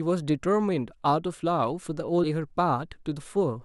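Speech clip in which, at 2.23 to 2.28 s, the sound jumps abruptly forward with a small blip, likely a stream segment skipped: one segment failed to load and playback resumed at the next.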